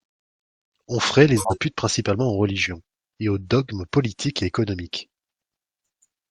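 From 1.37 to 1.58 s the speech is interrupted by a corrupt frame decoded: damaged bits in the compressed stream were decoded anyway, misplacing energy across the spectrum. It sounds like a harsh squeaking burst, spanning what fits about four frames.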